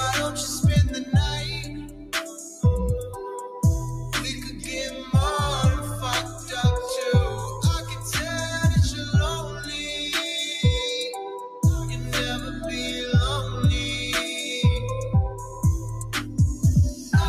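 Throughout, a noise suppressor applied to music or sounds is treating sustained material as noise, so held tones and decays are pulled down while onsets pass. The level swings by roughly 5 dB, heard as pumping and thinning; a spectrogram shows sustained partials fading between bright attack columns.

Sound cut by the noise suppressor appears at 1.64 to 2.63 s, the deepest drop, about 12 dB. Shorter dips follow at 4.46–4.64, 4.93–5.13, 6.24–6.5, 9.46–9.67, 11.47–11.63, 15.39–15.64 and 16.94–17.12 s, each about 5 to 8 dB. They sound like tails suddenly swallowed, and show as waveform notches and darkened spectrogram bands.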